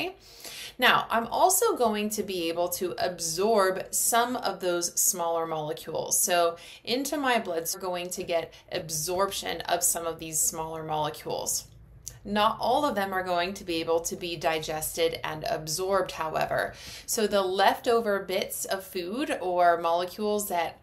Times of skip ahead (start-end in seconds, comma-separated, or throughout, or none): 7.73